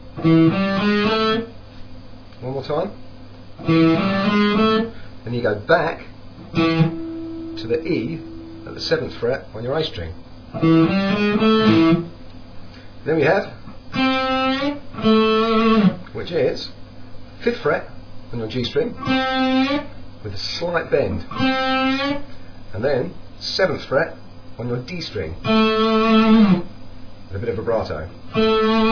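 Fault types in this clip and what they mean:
No technical faults can be heard anywhere in the recording.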